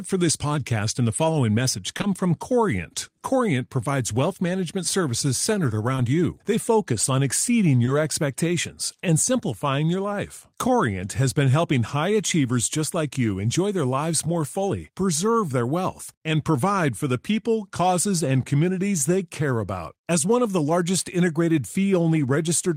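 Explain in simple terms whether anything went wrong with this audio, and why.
A few tiny pieces of the speech never arrived in time, a fault called short concealed packet loss. It happens at 1.97 to 2.01 s and 2.01 to 2.05 s, back to back just after "and the following message", then at 5.95 to 5.99 s after "wealth management services centered", and at 7.85 to 7.89 s. Each time, the receiver covered about 20 ms by stretching the sound just before it. The result is a brief smear or wobble rather than a hard silent dropout.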